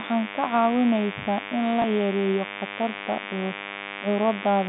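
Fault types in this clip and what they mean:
Mains buzz: Switching spikes from the 50 Hz supply leak in. A steady, raspy buzz sits only about 10 dB below the speech throughout.
Packet loss with last packet repeated: From 1.82 to 1.84 s, between "caawinaysaa in" and "yareeyo khatarta", 20 ms of audio is replayed, causing a small blip.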